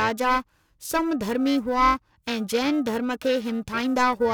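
Periodic clock jitter runs through the whole speech clip. Interference wobbles the converter's clock at roughly 1 kHz. Each component gains sidebands about 1 kHz above and below it, strongest on high frequencies. The sound takes on a rough, metallic edge that disappears in pauses.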